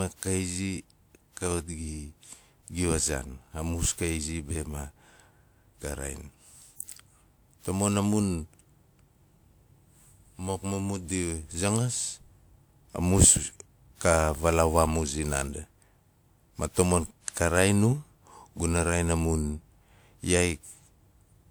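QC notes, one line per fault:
Throughout: generation loss. The speech has a swirly, smeared, hollow quality that is worse than the bandwidth suggests, since content still reaches about 20.1 kHz, and consonant attacks are blurred. The likely cause is repeated lossy re-encoding, around seven passes, with a character that points to WMA at 128 kbit/s. Each pass re-quantises on a shifted frame grid, so quantisation noise and spectral holes accumulate rather than cancel.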